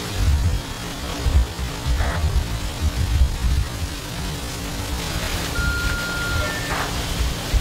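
From the start to about 5.32 s the audio runs as a time-stretched section, played at roughly 0.51 times its original pace, so it takes about twice as long as it should while the pitch stays where it was. The likely cause is software lengthening the passage to fill a set duration by repeating short slices instead of resampling. The slowed passage drags, and the normal pace returns abruptly at 5.32 s.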